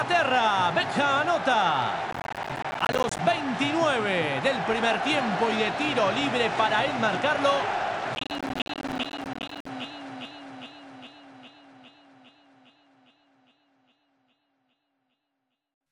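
Processor overload crackle, from 2.11 to 3.19 s and again from 8.15 to 9.69 s: dozens of short buffers, around 10 ms each, miss their deadlines and drop out as silence, tearing the sound into gritty crackle.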